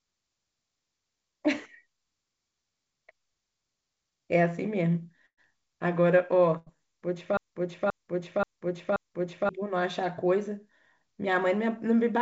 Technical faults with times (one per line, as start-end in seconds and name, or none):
5.26-5.39 burst of packet loss
6.57-6.79 burst of packet loss
7.37-9.49 broken-record loop